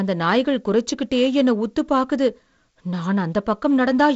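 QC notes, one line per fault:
No faults heard in this speech clip.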